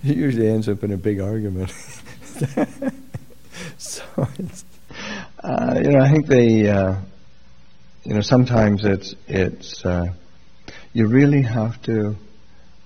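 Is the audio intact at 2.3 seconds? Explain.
Yes, at 2.3 seconds the audio plays through intact, with no dropout, click, glitch or other fault.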